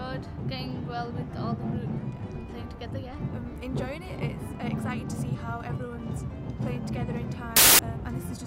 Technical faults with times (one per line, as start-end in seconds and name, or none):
7.56-7.79 wrong sample width